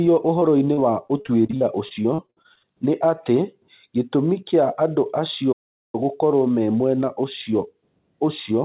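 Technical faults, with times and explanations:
0.40–2.65 s: repeated packet loss (robotic sound). Seventeen short holes, the longest 58 ms, are each patched by stretching the preceding sound, so about a fifth of this span is synthetic fill. The speech turns choppy and robotic, with fragments missing between patches.
5.52–5.95 s: playback stall. The speech cuts off mid-flow into silence for about 0.41 s, then resumes. The likely cause is the player running out of buffered data or its output thread being blocked until it could continue.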